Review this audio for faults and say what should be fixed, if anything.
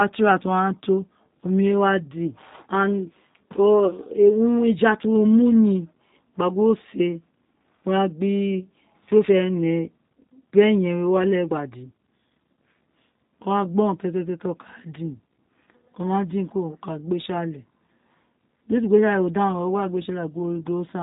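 G.729 codec damage runs through the whole clip and is plainly audible. The speech sounds rough and faintly synthetic because it is rebuilt from a vocal-tract filter, a pitch predictor and sparse pulses in each 10 ms frame, which fits an 8 kbit/s stream. A spectrogram shows a hard ceiling at 3.8 kHz with nothing above it. To prevent this, record or route the call through a wideband codec or an uncompressed path instead of a narrowband G.729 leg.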